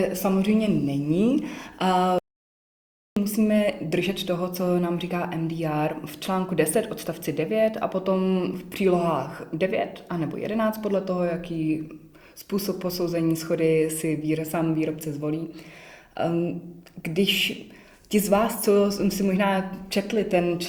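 The audio has an audio dropout to silence from 2.19 s to 3.17 s, removing about 0.98 s. The sound stops abruptly mid-flow and returns just as suddenly, with no room tone in between. The likely cause is a brief loss of the input signal while recording continued and filled the gap with silence. On a waveform this is a flat line; on a spectrogram, a solid black band across all frequencies with hard vertical edges.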